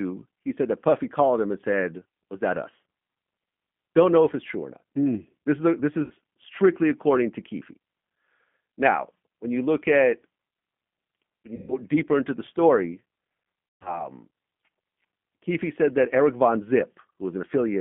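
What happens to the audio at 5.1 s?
At 5.1 s the speech carries the same G.729 codec coloration present through the whole clip. The coder models each 10 ms frame as a vocal-tract filter and a pitch predictor, excited by a few sparse pulses, which fits an 8 kbit/s rate. The line band runs from 150 Hz to 3.4 kHz, so the voice sounds thin and boxy. The coding damage is plainly audible as a rough, slightly synthetic buzz on the speech.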